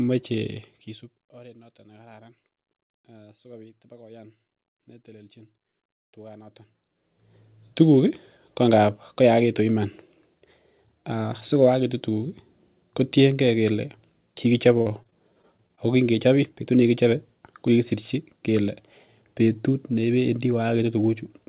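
A speech clip with two faults. From 0.49 to 1.34 s there is zipper noise. The level falls by roughly 25 dB in coarse, unsmoothed steps, about 50 per second. Each step clicks, so a fine ticking rides on the sound until "oret noton nekararan". From 14.78 to 15.79 s there is repeated packet loss, heard as robotic sound. Short holes follow one another, the longest 38 ms. Each is patched by stretching the last sound, so this span turns choppy with pieces missing. The audio stops at 4 kHz, which fits a G.711 call path.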